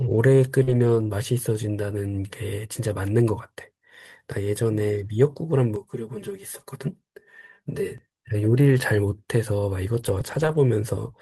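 At 0.63 to 0.69 s and again at 1.07 to 1.11 s, short concealed packet loss leaves gaps of about 40 ms and 20 ms. The decoder extends the preceding speech across each hole and fades back into real audio, so both register as a quick smear or wobble.

Lost packets rebuilt from error correction occur at 0.67 to 1.05 s, 8.69 to 8.79 s and 9.99 to 10.57 s. Low-bitrate redundant copies stand in for the missing frames, so nothing drops out, but those 200 ms, 60 ms and 300 ms stretches sound rougher and noisier.

From 5.76 to 7.98 s, a channel delay of roughly 5 ms combines with the other channel in the mono sum, causing comb filtering. Notches starting near 100 Hz and repeating evenly up the spectrum make the speech hollow and phasey.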